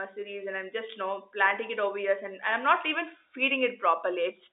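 No technical faults can be heard in this speech; it carries the narrow band of G.711 telephone coding, roughly 300 Hz to 3.7 kHz, with nothing above that range.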